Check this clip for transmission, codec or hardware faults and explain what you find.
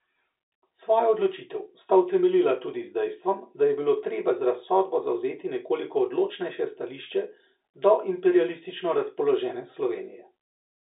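There are no transmission, codec or hardware faults to report in this clip.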